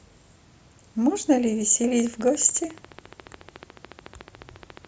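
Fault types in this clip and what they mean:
Train of clicks: from 2.00 s to 4.86 s a steady ticking runs over the speech and through its pauses, about fourteen near-identical clicks per second at even spacing, some forty in all, peaking roughly as loud as the speech itself. The likely cause is interference from nearby equipment or a faulty connection or power supply. A waveform shows evenly spaced sharp spikes, and a spectrogram shows a comb of thin vertical broadband lines across all frequencies.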